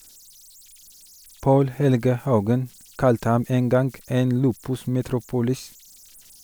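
Right through the speech there are converter idle tones: an undithered delta-sigma converter settling into repeating bit patterns on low-level input. You get a faint whistle somewhere around 7 kHz in the pauses and grainy hash under quiet passages, sitting about 31 dB below the signal.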